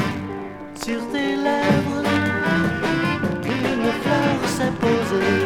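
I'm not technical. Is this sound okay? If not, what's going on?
Yes, it's fine: nothing in it points to a technical problem, so there's nothing you need to worry about or fix.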